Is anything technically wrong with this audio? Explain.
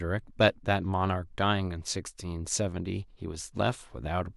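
No, nothing technically wrong is audible here.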